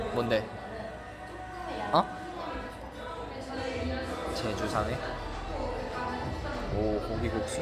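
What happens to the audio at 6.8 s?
Nothing goes wrong at 6.8 s; the audio plays through that moment intact, with no dropout, click or other fault.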